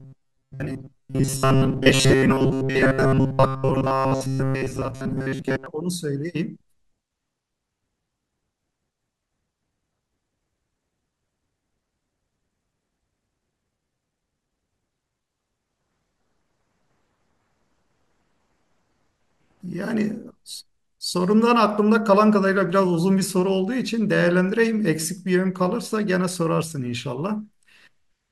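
Right from the start, about 0.01 s through 5.66 s, the speech has that robotic sound from repeated short buffers. It locks onto a stiff buzz at 133 Hz, so each repeated chunk is roughly 7.5 ms long. The likely cause is audio arriving too slowly, with the playback side looping its last little buffer to cover the gaps for most of that stretch. The real audio in between just gets dropped, leaving a metallic drone that only loosely tracks the speech.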